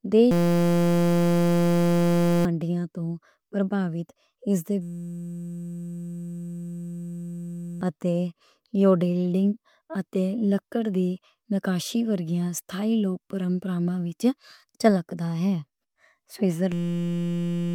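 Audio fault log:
0.31–2.45 s, 4.82–7.81 s and 16.72–17.75 s: system hang loop. The computer or audio driver stalled three times while the sound hardware kept replaying the same 5.8 ms piece of its ring buffer, which fits a 256-sample buffer. Because that tiny slice repeats over a hundred times, the speech gives way to a steady, flat buzz at 172 Hz, the loop rate. Roughly two seconds, three seconds and one second of audio are lost.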